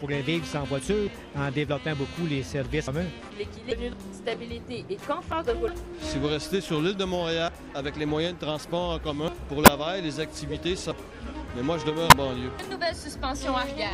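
At 2.87 s the sound skips forward: a piece of about a fifth of a second is gone and the two sides are butted together with no gap. The same abrupt jump returns at 3.93, 5.68, 7.48, 9.28, 10.91 and 12.59 s. This is audio missing between chunks. The capture was likely handled in 2.0 s blocks, and each handover between blocks dropped a slice before the next one began.

In between, at 3.69 to 3.73 s, a brief glitch cuts through, and similar glitches follow at 5.32 to 5.34, 9.64 to 9.68 and 12.09 to 12.13 s, each lasting roughly 25 to 45 ms. These come from damaged data in a compressed stream. Corrupted bytes made the decoder misread those frames, lose sync and hunt for the next valid frame header, disrupting the sound at those points.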